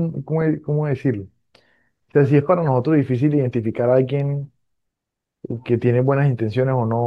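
No technical faults are audible in this speech.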